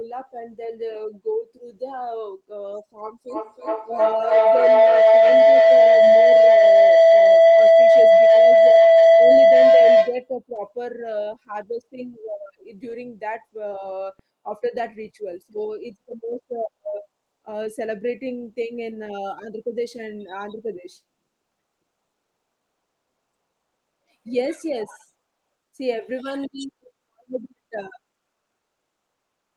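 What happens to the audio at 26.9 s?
Nothing goes wrong at 26.9 s: the speech there comes through intact, carrying only the ordinary band-limited character of the call path it passed through.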